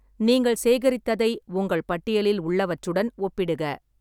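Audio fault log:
No faults heard anywhere in the speech.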